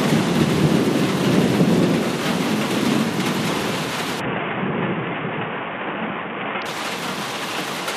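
From 4.20 s to 6.66 s the Bluetooth link appears to have come under congestion, and the sender answered with a Bluetooth SBC bit pool drop. The sound fits a fall in bit pool from about 31 down to 5, roughly 50 kbps. With so few bits, the highest sub-bands are starved and the rest are quantised coarsely, so the treble goes dull and a gritty, grainy noise rises under the audio until the full rate returns at 6.66 s.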